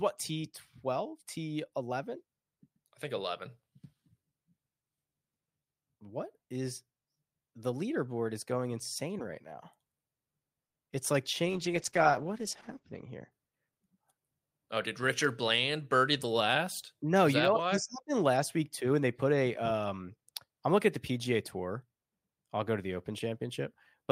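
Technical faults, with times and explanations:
10.88 to 10.94 s, short concealed packet loss: two back-to-back losses, at 10.88 to 10.91 s and 10.91 to 10.94 s, each leaving about 20 ms of speech missing. The receiver bridged each hole by extending the preceding sound and then blending back into the real signal, so there is a brief smeared wobble rather than a gap. The sound carries on through the loss instead of falling silent or clicking, which distinguishes concealment from a plain dropout.
11.48 to 13.37 s, call bitrate drop: the encoder rate fell from 48 kbps to 11 kbps and stayed at its lowest for about 1.55 s. At that rate Opus narrows the coded band from 20 kHz to 8 kHz and quantises more coarsely. The speech turns muffled, with a rough, watery texture. Unlike a fixed low-pass filter, the loss of detail covers only this stretch, and the full bandwidth returns as the rate recovers.
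13.65 to 14.21 s, jitter buffer speed-up: the receiver was holding more audio than its target and trimmed it by cutting out many short pitch-period slices in a row, removing about 70 ms in total. Playback runs at about 111% of normal speed, so the speech sounds briefly hurried. The pitch stays unchanged, which separates this from a sample-rate or playback-speed error, where faster audio would also sound higher.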